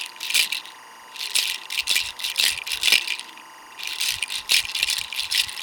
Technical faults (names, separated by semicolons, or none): timecode bleed